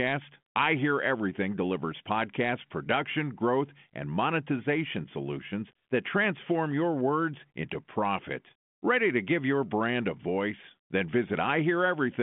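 Nothing goes wrong anywhere in the recording; the speech simply carries the narrow telephone band of a G.726 link at 40 kbit/s, roughly 150 Hz to 3.4 kHz, with nothing at all above 3.8 kHz.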